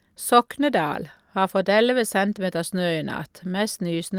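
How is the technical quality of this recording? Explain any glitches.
No glitches or technical faults can be heard anywhere.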